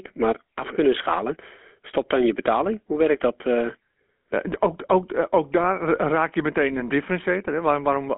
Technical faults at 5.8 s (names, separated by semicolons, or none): GSM full-rate codec